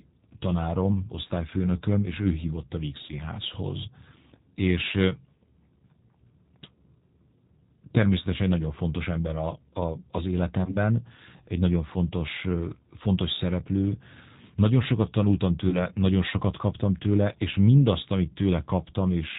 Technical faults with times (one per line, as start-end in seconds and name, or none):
0.00-19.39 G.729 codec
1.03-1.06 VoIP packet loss concealed by the speech codec
3.07-3.14 VoIP packet loss concealed by the speech codec
10.65-10.76 VoIP packet loss concealed by the speech codec
15.70-15.78 VoIP packet loss concealed by the speech codec